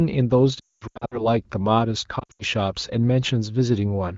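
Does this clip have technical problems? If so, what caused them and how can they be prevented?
Yes. Lost AMR speech frames at 0.60–1.28 s and 2.20–2.43 s made the decoder reuse its last good pitch and vocal tract settings with falling gain. The sound smears and fades instead of cutting to the hard silent gaps or clicks of a plain dropout. Better radio coverage or stronger channel error protection would prevent it.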